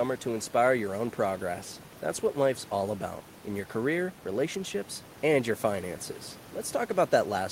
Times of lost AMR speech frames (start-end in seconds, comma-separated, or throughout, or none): none